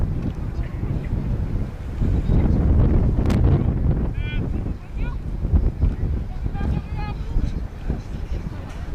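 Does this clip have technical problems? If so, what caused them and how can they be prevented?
Yes. A worn or dirty contact briefly made and broke the connection, chopping the signal into an irregular burst of loose connector crackle from 3.24 to 3.35 s. Cleaning or replacing the connector and securing the cable against movement prevents it.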